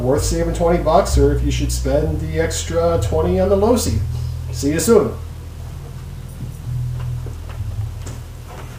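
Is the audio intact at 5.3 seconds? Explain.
Yes, the audio is intact at 5.3 seconds, with no fault at that moment.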